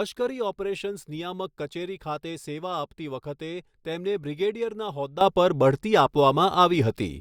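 A sudden gain jump hits this speech clip at 5.21 s and holds to the end: the level rises by about 11 dB in a single step, background noise lifting with the speech. This points to a likely digital gain change applied without any ramp.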